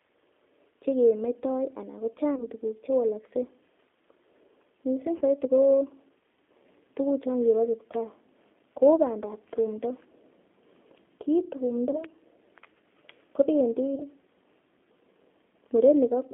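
From start to finish the speech carries G.729 codec damage, plainly audible as a slightly rough, synthetic texture. The line is confined to roughly 200 Hz to 3.5 kHz, so everything above that is gone. At 8 kbit/s the coder rebuilds each 10 ms frame from a vocal tract filter, a pitch predictor and a few pulses rather than the real waveform. That sparse excitation is what gives the voice its rough, synthetic edge.

VoIP packet loss concealed by the speech codec then appears four times. At 2.35 to 2.46 s, just before "tuguk chewalakse", about 20 ms of signal is missing, which fits a single lost packet. The decoder stretches its last pitch and filter into a buzzy tone or coloured noise that fades, and the voice stays weak or distorted for tens of milliseconds or more beyond the gap. At 5.17 to 5.22 s a 40 ms loss gives the same effect. Further 20 ms losses follow at 11.91 to 12.04 s and 13.95 to 14.04 s.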